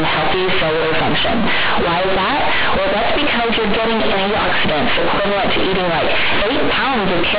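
From start to finish the speech is companded audio read as linear: mu-law bytes are played as plain 8-bit samples with no expansion. Every sign change swings the output across about half its range, flattening level differences, so the sound is loud, buzzy and heavily distorted, with strong noise filling pauses.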